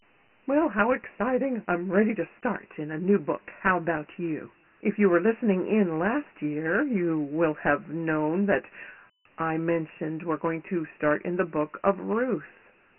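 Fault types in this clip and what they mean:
Dialogic VOX ADPCM: The speech sounds thin, boxy and coarse, with a gritty hiss that rides along with every syllable and drops away in the gaps. Nothing reaches above 3 kHz, and the low end is trimmed too, so the result is heavily degraded telephone-style audio. The cause is 4-bit adaptive differential coding, which stores only a rough step between samples. The 3 kHz ceiling fits a 6,000-sample-per-second VOX file.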